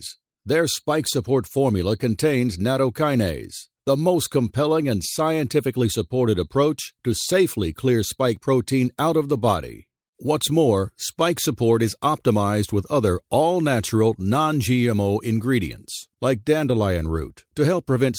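No technical faults are audible anywhere in the speech.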